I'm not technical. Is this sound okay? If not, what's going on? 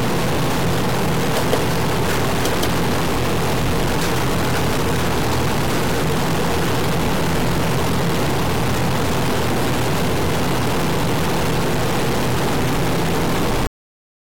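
No. All the way through, the sound has a distorted roughness, and even the quiet gaps are filled with a gritty hiss instead of silence. That points to a stuck bit, likely one digital bit stuck in the converter. Unlike ordinary background hiss, the noise changes with the sound itself.

At 13.67 s the audio suddenly stops mid-sound and drops to total silence for the last half second, with no fade or trailing echo. That is a cut-off end: the final chunk was never played. A deliberate fade-out would tail away gradually instead.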